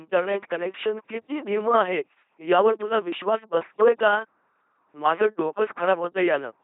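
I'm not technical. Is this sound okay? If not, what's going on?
No, it isn't. Two faults run through the whole clip. First, the LPC-10 vocoder has rebuilt the speech as a buzzing, robotic voice, with nothing above 3.8 kHz, so it sounds muffled and mechanical. Second, a channel delay (comb filtering) makes one channel arrive a tiny fraction of a millisecond late, and combining the channels hollows out the sound around 7 kHz.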